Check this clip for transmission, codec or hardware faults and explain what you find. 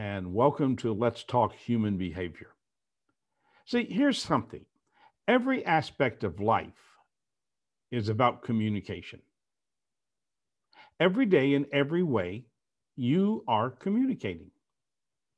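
Nothing stood out on listening to this speech recording; no transmission, codec or hardware problem could be heard anywhere in it.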